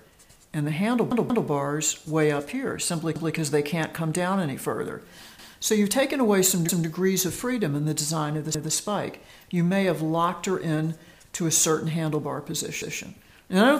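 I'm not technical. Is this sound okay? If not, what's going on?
No. Six times a short piece of the sound plays again right after itself, like a skip that stutters: at 1.12 s (heard three times in a row, to 1.49 s), and at 3.16, 5.39, 6.69, 8.55 and 12.82 s (twice each). This is a repeated buffer. The playback device ran out of fresh audio and replayed its last chunk of about 0.19 s, which fits an 8192-sample buffer. Nothing seems to be lost; the sound just stalls and repeats.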